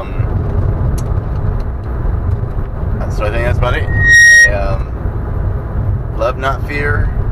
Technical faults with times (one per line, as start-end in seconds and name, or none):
3.87-4.54 loudspeaker feedback squeal